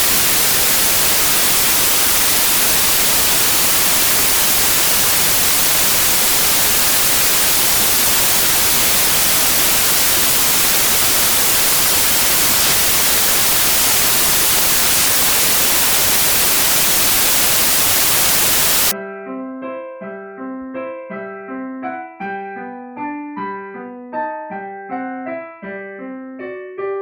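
From the start at 0.00 s until 18.91 s, the samples are built from the wrong bytes. The reader assembles each sample's bytes in the wrong order or at a shifted offset, so the rapidly changing low byte ends up as the most significant part of every value. The result is loud, harsh broadband noise, close to white on the louder sounds. Unlike added background hiss, the noise is not a layer over the sound. It replaces it.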